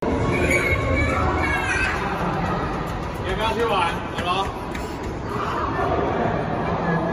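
At 5.64 s the audio abruptly slows by about 6% and drops in pitch by roughly 106 cents, a little over a semitone, and stays there to the end of the clip. This is likely a drift correction step, where clock-matching software changed the playback rate in one jump to rebalance its buffer. It sounds like a sudden detuning. On a spectrogram, every harmonic line steps down together at that moment; in the waveform, cycles and events stretch out.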